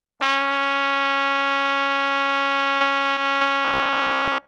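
Short concealed packet loss hits at 2.79–2.82 s, 3.14–3.18 s and 3.38–3.42 s: about 20 ms went missing each time and was patched by extending the preceding sound, giving brief smears that show as smoothed, blurred patches on a spectrogram.

From 3.65 s to the end, the sound turns into a rigid metallic buzz at 66.7 Hz, with evenly spaced vertical striations on the spectrogram and a periodic repeating waveform. This is robotic sound from repeated short buffers, likely caused by a roughly 15 ms chunk being replayed while about half the real audio is skipped.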